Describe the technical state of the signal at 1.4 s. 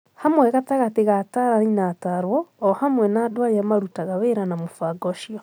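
At 1.4 s the speech signal is intact, with no audible fault at that moment.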